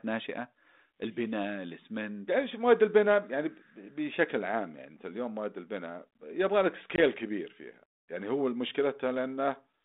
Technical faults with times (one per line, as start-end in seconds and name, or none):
6.96-6.99 packet loss on an ADPCM call